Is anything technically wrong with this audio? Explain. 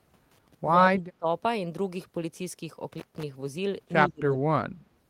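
Yes. Intermittent contact at 0.31–0.55 s and 2.92–3.23 s: a loose connection opens for about 95 ms, then 150 ms, cutting the audio with crackle, leaving faint hiss. Speech suppressed in double talk at 0.92–1.26 s and 4.08–4.86 s: the speech drops by roughly 30–35 dB, likely an echo canceller muting it during simultaneous talk.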